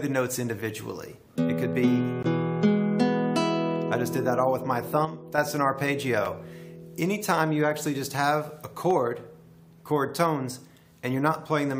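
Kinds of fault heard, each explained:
Dropped samples: Single sharp clicks at 1.73 s and 8.91 s, each a thin vertical line across the spectrum. The likely cause is a tiny fraction of a millisecond missing from the stream, making the waveform jump. Unlike a segment gap, no silence is heard.
Gap between stream segments: Brief hard-edged holes of silence, 16.6 ms at 2.23 s and 5.4 ms at 6.25 s, where playback pauses and resumes without losing audio. This fits misaligned timestamps on 2-second segments. Dropped samples give a click, but this gives an audible pause.
One channel drops out: From 5.05 s to 5.38 s the sound falls abruptly by about 6 dB, then returns at full level. This is likely one stereo channel going missing so the mono sum loses half its contribution. It is a level step, not a click or a silence.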